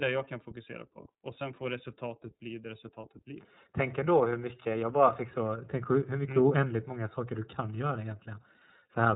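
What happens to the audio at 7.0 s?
At 7.0 s the speech carries the iLBC codec's damage, present across the whole clip: nothing above 3.8 kHz and a plainly rough, synthetic texture from excitation coded frame by frame, which fits 30 ms frames at about 13 kbps. A simple low-pass filter would dull the sound without that grain.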